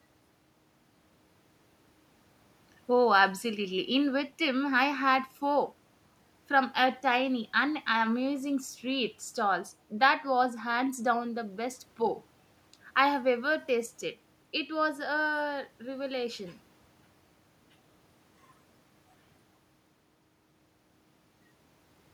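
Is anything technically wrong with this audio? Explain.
No, there's nothing technically wrong with this speech recording that I can hear.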